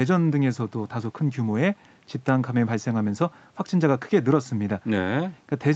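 The speech contains no audible technical faults.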